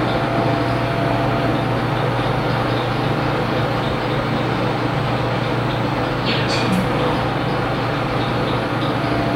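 Nothing in this recording of sounds stands out as a technical fault; it just runs along as you'd hope, with no trouble to point to anywhere.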